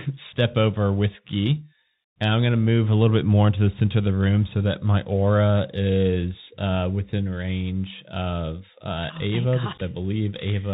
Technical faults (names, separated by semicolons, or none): Bluetooth CVSD headset codec; unconcealed Bluetooth headset packet loss